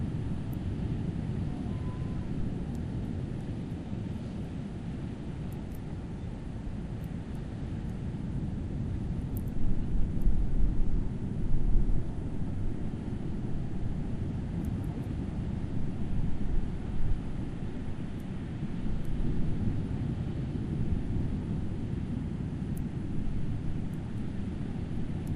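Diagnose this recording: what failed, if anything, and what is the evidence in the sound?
Nothing here points to a failure at any stage: the sounds carry no audible defect anywhere along the chain from capture to playback.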